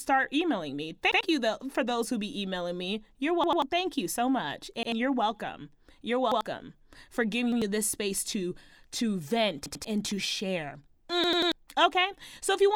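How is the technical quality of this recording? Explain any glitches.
The recording is marred by seven repeated-buffer glitches in the speech. Fresh audio repeatedly failed to reach the playback device in time, so it replayed its last chunk of about 93 ms, which fits a 4096-sample buffer. Each one is heard as a brief stutter with hard joins.

At 1.12 s, right after "emailing me", one extra play replaces roughly a tenth of a second before "you though for those".
At 3.44 s, two extra plays loop the chunk three times in all, losing about a fifth of a second.
At 4.83 s, between "you so much" and "you're welcome", one repeat is heard.
At 6.32 s and 7.52 s, each has a single repeat.
At 9.66 s, after "space to to vent", the chunk plays three times before "and to share".
At 11.24 s, the longest stutter has three extra plays, wiping out roughly 300 ms.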